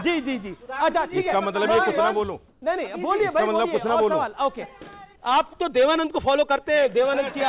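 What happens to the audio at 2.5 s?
From 2.48 to 2.62 s, about 140 ms, the real background gives way to comfort noise. The sender likely paused transmission in a quiet stretch, and the receiver filled the gap with synthetic noise. On a spectrogram, the detailed texture becomes a smooth, even wash below 4 kHz. The waveform turns steady and featureless, about 1 dB quieter.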